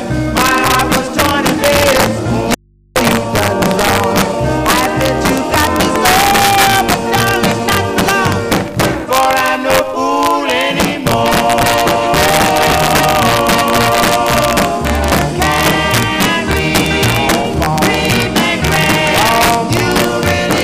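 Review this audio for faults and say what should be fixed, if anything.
Integer overflow runs right through the audio: the gain sits about 4 dB too hot, so roughly one percent of samples pass the integer limit and wrap to the opposite sign instead of clamping. Each loud peak becomes a harsh crack, far nastier than clipping. Pull the gain down or use saturating arithmetic so peaks clamp at full scale.

At 2.54 s the audio drops out to a faint residue and returns at 2.96 s, about 0.42 s later. The gap holds only mains hum, roughly 35 dB below the signal, so the downstream path stayed live while the source cut out, likely a loose connection or input fault. Check and secure the source cabling and input stage so the feed can't drop mid-take.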